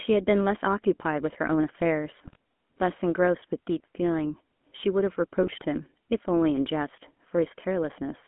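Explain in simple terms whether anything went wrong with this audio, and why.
The call went through the old GSM full-rate phone codec, which rebuilds speech from a simplified model of the throat driven by a coarse pulse pattern, keeping only roughly 200 Hz to 3.4 kHz. Throughout, the speech sounds thin, buzzy and gravelly.

GSM bit errors also struck twice, from 2.23 to 2.36 s and from 5.43 to 5.62 s. The weak link flipped bits in the coded data, so the decoder briefly rebuilt the sound with wrong settings. Each moment breaks into a short garbled, squawky burst.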